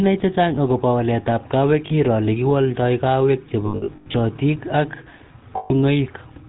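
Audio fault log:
throughout: GSM full-rate codec. The speech passes through the early GSM full-rate coder at 13 kbps, and the damage is plainly audible. The coder models the vocal tract and drives it with sparse, evenly spaced pulses. Only a third of the excitation survives. Nothing above 4 kHz gets through, so the sound is dull and band-limited. The thin pulse train leaves a buzzy, gravelly roughness on every voiced stretch.
1.86 to 1.94 s, 3.66 to 4.15 s, 5.56 to 5.71 s: lost GSM frames. The first loss lasts 40 ms, just before "iroo lekiwaldai kaweek". The second follows "kaweek iroo lekiwaldai kaweek". It totals 340 ms of lost frames scattered over about half a second, and the longest gap is around a tenth of a second. The third loses 140 ms. In each gap the decoder repeats the last good frame. That holds the sound as a rough, metallic ring.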